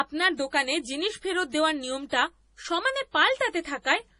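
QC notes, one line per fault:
throughout, MP3 compression: the treble stops dead at 10.5 kHz and weak detail flickers in and out, giving a watery, swirly speech sound. The likely cause is heavy MP3 encoding at a low bitrate, around 32 kbps. A spectrogram shows a flat ceiling with patchy, blocky holes below it.
2.09 to 2.12 s, pre-echo: a short hiss leads a sharp onset by about 31 ms, and the attack sounds softened. The codec spread noise meant for the loud onset across the quiet gap before it, which appears as a smear of grey noise just ahead of the transient.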